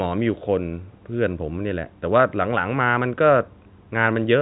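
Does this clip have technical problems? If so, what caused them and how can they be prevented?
No, this is speech carried over G.711 telephone coding, so nothing sits above 3.9 kHz, and the call microphone processing has trimmed the lowest bass as designed, neither of which is a fault.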